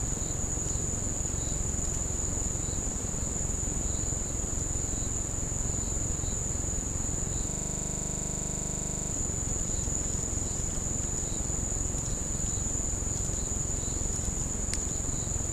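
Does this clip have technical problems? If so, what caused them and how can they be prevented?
Yes, there's a system hang loop from 7.50 to 9.12 s: the machine stalled while the audio hardware kept replaying its ring buffer, so one 40 ms slice repeats about forty times, giving a rough 25 Hz buzzing stutter. To prevent it, run audio in a high-priority thread and have the driver mute output when the buffer stops refilling.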